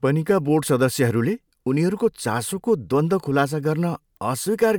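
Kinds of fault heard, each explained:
No technical faults can be heard in this speech recording. The audio holds steady throughout, with nothing to single out.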